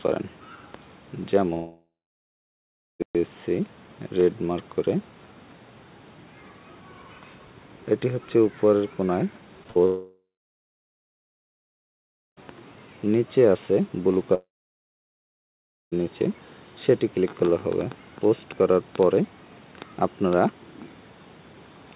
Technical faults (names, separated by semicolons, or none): long network dropout; short concealed packet loss; burst of packet loss